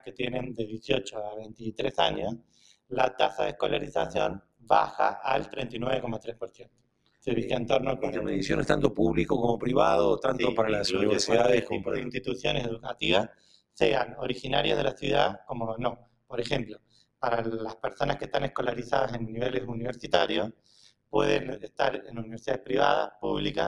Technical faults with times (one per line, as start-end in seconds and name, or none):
0.00-23.67 noise suppressor applied to music or sounds
0.00-23.67 overlap-add ripple
0.00-0.20 sound cut by the noise suppressor
1.40-1.64 sound cut by the noise suppressor
2.37-2.92 sound cut by the noise suppressor
4.39-4.70 sound cut by the noise suppressor
6.19-7.27 sound cut by the noise suppressor
12.86-14.15 sound cut by the noise suppressor
14.94-18.27 sound cut by the noise suppressor
19.93-23.24 sound cut by the noise suppressor